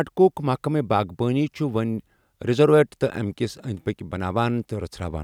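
Speech recording, no technical faults detected.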